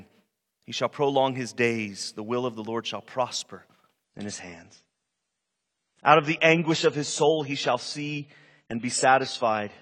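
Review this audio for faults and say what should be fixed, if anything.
From 4.04 s, right after "shall prosper", the speech turns abruptly duller and swirly through to the end, with nothing above 9.6 kHz and no gap at the switch. This is an adaptive stream at a lower bitrate: the player dropped to a leaner encoding when throughput fell, and the sound points to something like a step from 96 to 24 kbit/s AAC. To prevent it, provide more stable bandwidth or set a higher minimum rendition.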